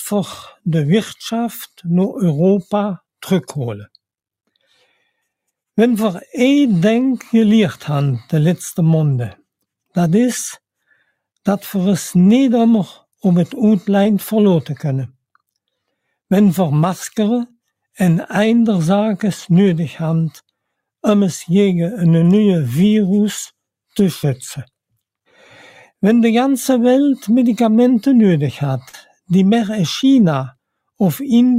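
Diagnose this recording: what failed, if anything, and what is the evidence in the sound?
Network stage: short concealed packet loss. Audio went missing at 14.03–14.07 s, 28.89–28.95 s and 30.01–30.05 s, about 20, 40 and 20 ms. The decoder extended the preceding sound across each gap, then blended back, leaving brief smears, longest at 28.9 s.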